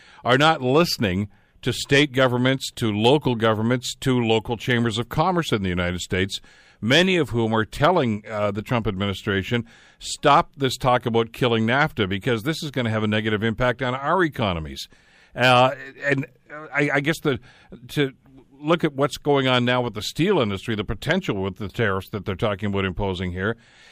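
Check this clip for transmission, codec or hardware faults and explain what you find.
No faults found.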